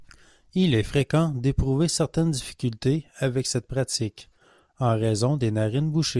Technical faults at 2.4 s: none

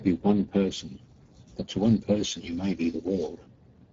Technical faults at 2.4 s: Speex codec

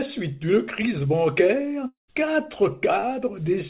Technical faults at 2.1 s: long network dropout

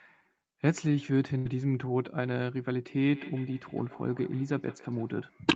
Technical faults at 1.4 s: burst of packet loss

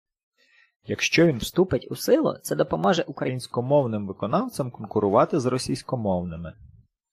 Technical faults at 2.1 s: section at the wrong speed

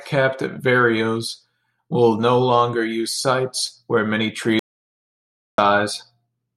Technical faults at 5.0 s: audio dropout to silence

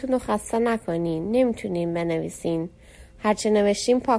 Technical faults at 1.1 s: aliasing

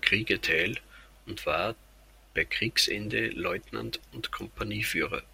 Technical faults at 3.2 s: none

